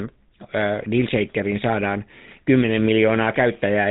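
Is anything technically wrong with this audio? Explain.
Yes. Throughout the speech you can hear the GSM full-rate codec at work. It rebuilds the voice from a vocal-tract model driven by sparse, regularly spaced pulses, which gives that buzzy, gravelly roughness, and the band stops at about 3.8 kHz. The pattern fits roughly 13 kbps.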